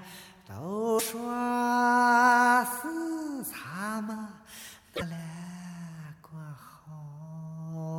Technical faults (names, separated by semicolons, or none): broken MP3 bit reservoir